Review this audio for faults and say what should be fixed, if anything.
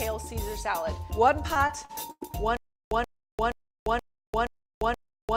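From 1.53 to 2.35 s there's repeated packet loss (robotic sound): six dropouts, the longest 97 ms, each patched by stretching the last bit of audio. That's about 220 ms gone, making it choppy. A bigger jitter buffer or forward error correction would prevent it.

From 2.57 s to the end there's a stutter with silent gaps. A 129 ms burst repeats every 475 ms with roughly 346 ms of dead silence between, likely a stream stalling and replaying its last fragment on each retry. Better buffering or underrun handling would stop it.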